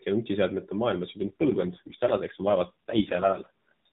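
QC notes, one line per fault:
1.18 to 3.50 s, AMR rate drop: right after "ja nutiseadmete maailma" the speech turns rougher and more synthetic, with a buzzy texture, and stays that way until 3.50 s. The mobile codec has stepped down from 12.2 to 4.75 kbps, which fits a link asking for more bits to go to error protection, so fewer pulses are left to model each frame. The narrowband audio limit stays the same and there is no gap, only the coarser voice.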